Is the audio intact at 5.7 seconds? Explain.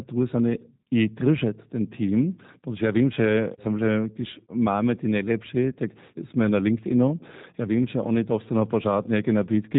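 No. From 5.72 to 5.77 s, between "když máme ty nejlepší" and "jsme na", VoIP packet loss concealed by the speech codec is audible. About 20 ms of audio went missing, which fits a single lost packet. The decoder filled the gap by extrapolating its last pitch and filter at falling gain, stretching the sound into a brief fading artefact. The G.729 codec runs throughout at 8 kbit/s, so the sound is band-limited to 4 kHz with a noticeably rough, synthetic texture.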